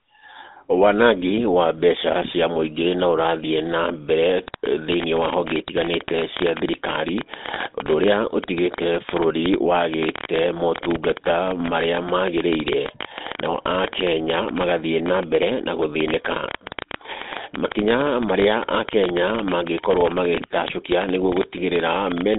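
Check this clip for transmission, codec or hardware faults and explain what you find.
Two faults are present: GSM-style codec damage across the whole recording, and a train of clicks covering most of it.

The GSM full-rate codec affects the entire clip. The band runs from about 200 Hz to 3.7 kHz, with nothing above 3.8 kHz, which fits 13 kbps GSM. The codec models the vocal tract and drives it with a sparse, regularly spaced excitation, keeping only every third sample. The speech sounds plainly buzzy and gravelly.

A train of clicks starts at 4.48 s and runs to 22.36 s, around two hundred of them at an irregular average of 12.7 per second. Each click peaks roughly 15 dB above the speech. They are likely caused by interference from nearby equipment or a faulty connection, and they are heard as uneven ticking over the speech.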